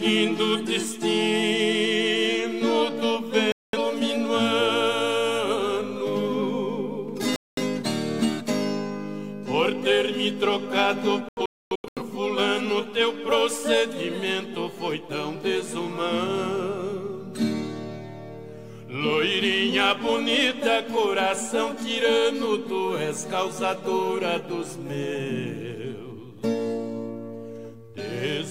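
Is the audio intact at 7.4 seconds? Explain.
No. From 7.36 to 7.62 s there is a digital broadcast dropout: the receiver lost valid frames and muted until good ones returned. The sound cuts to silence and resumes further along, with roughly a fifth of a second lost, consistent with a handful of dropped frames. Unlike packet-loss concealment, nothing is repeated or smeared over the gap.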